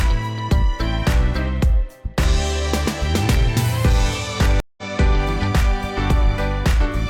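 At 4.60 s the connection dropped, and the player fell silent, reconnected and started a fresh decoder partway through the stream, a stream reconnect lasting until 4.83 s. The sound cuts out for about 173 ms, then picks up at a later point in the stream, roughly 150 ms further on, so a short stretch is simply skipped. The restart leaves the resumed audio briefly muted or softened before it settles.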